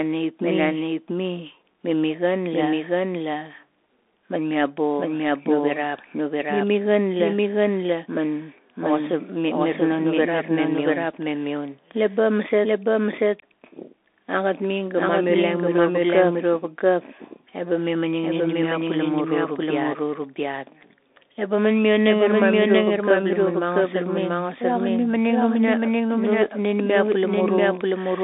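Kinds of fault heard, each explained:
Doubled audio track, throughout: a second full-band copy of the speech runs roughly 0.7 s behind the first at about the same loudness, with no decay or room colour. This is likely a second capture path or an edit holding two copies out of step.
Bluetooth CVSD headset codec, throughout: the speech is squeezed into a line band of roughly 300 Hz to 3.6 kHz, with nothing above 3.8 kHz. The adaptive one-bit coding, which fits a 64 kbps link, plainly distorts loud high sounds, roughens s sounds and leaves a granular hiss underneath.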